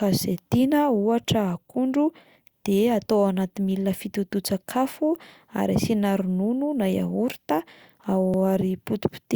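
At 8.34 s the speech has a tiny skip caused by an overlap between stream segments. Two consecutive segments, which fit a 6-second segment length, claimed overlapping time stamps, and the player discarded the shared span even though that sound was never duplicated. About 7 ms of audio is lost and the waveform jumps abruptly from one level to another. On a spectrogram it appears as a thin vertical broadband line; on the waveform, a sharp discontinuity.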